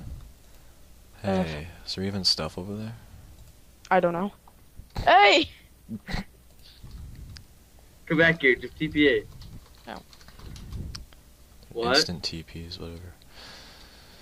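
From 4.19 s to 7.33 s the audio turns rough and watery, with the top end dulled, then regains its clarity. This is a call bitrate drop: the connection's bandwidth estimate fell, and the encoder had to code far more coarsely and trim high frequencies. The degradation is consistent with a fall from around 96 kbps to roughly 28 kbps, bottoming out for about 1.6 s before the bitrate climbs back.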